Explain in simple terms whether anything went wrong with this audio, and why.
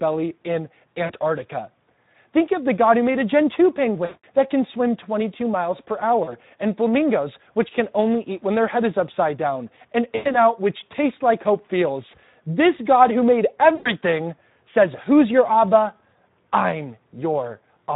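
Speex codec damage runs through the whole clip. This older internet-call speech codec squeezes the voice into very little data, so it plainly sounds noisy and hoarse: the coder keeps only a rough outline of each sound and can't rebuild the fine detail.

VoIP packet loss concealed by the speech codec happens five times: 1.05 to 1.13 s, 4.05 to 4.25 s, 6.23 to 6.36 s, 10.15 to 10.35 s and 13.75 to 13.9 s. Pieces of the call went missing, and the decoder guessed by stretching the last sound into a fading buzz or noise. The voice stays weak briefly afterward.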